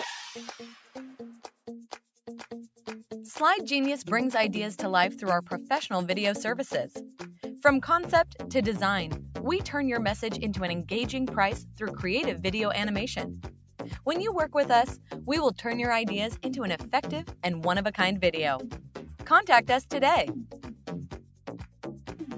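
All the way through, a noise suppressor applied to music or sounds keeps reading steady tones and tails as noise, so the level pumps by roughly 5 dB and held parts thin out. On top of that, sound cut by the noise suppressor sinks by about 11 to 12 dB at 0.73–0.95, 13.47–13.79, 14.96–15.11, 17.28–17.43, 18.75–19.19, 20.44–20.87, 21.11–21.47 and 21.63–22.13 s, each dip a few tenths of a second, with the call-style band topping out at 8 kHz.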